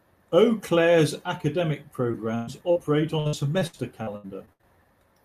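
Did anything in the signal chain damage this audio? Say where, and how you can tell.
Yes. Two brief smears at 2.11 to 2.15 s and 2.71 to 2.77 s sound like a tiny wobble in the speech, with a sliver of sound gone each time. This is short concealed packet loss at the network stage. About 20 ms and then 40 ms of the stream failed to arrive in time, and the receiver papered over each hole by extending the preceding sound before blending back into the real signal.

From 2.35 to 2.49 s the speech stalls into a held, fading continuation and then picks up slightly further along, as if a piece were skipped. That is a burst of packet loss: roughly 120 ms of consecutive audio was lost or arrived too late on the network path. The decoder kept extending the last sound while lowering it across the gap, so what was spoken in those 120 ms is missing.

From 3.19 to 4.65 s the speech turns choppy and robotic, breaking up again and again. 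This is repeated packet loss (robotic sound), again on the network. Ten separate gaps fall within that stretch, the longest 66 ms, and together they total about 420 ms, nearly a third of the span. Each gap is patched by extending the previous sound, and the next gap arrives before the voice can settle, which produces the fragmented texture.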